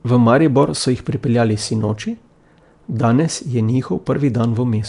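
Nellymoser compression runs throughout the speech, likely from Flash's Nellymoser Asao codec at a rate that fits 44 kbps. Its fixed bit budget starves weak bands and fills them with noise, giving a rough, hissy, smeared underwater sound with nothing above 10.6 kHz.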